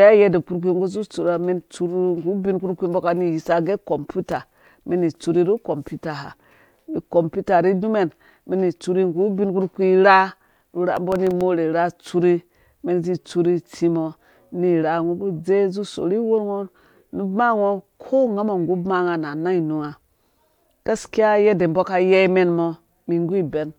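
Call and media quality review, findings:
Processor overload crackle, 4.24–4.83 s and 10.97–11.41 s, the second just before "ura atsuri". Gritty crackle riding on the speech. Probable component: audio processing thread on an overloaded CPU. Mechanism: a handful of missed deadlines per burst, each dropping a very short buffer, about 0.7 ms, to silence. The gaps have hard edges, so they click, and the clicks merge into tearing. Both bursts stop once the load clears.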